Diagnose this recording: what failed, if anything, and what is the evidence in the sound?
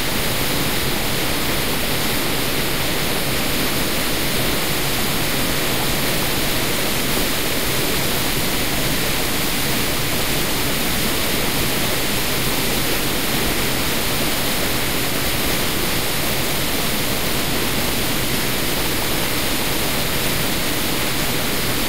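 A DC offset runs through the whole recording of sounds. The waveform is shifted from zero by a constant of about -24 dBFS. It is inaudible but shows as steady energy at the spectrum's very bottom and wastes headroom. This points to the analogue input or converter.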